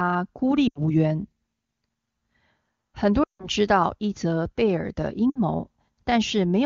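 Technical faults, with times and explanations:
0.67–0.79 s, 3.23–3.48 s and 5.30–5.38 s: lost AMR speech frames. Damaged frames failed their check, so the HD Voice decoder repeated the last good pitch and vocal tract settings at falling gain. The 80, 160 and 60 ms gaps each drop to near silence within two frames, and the voice comes back weak or rough for a moment.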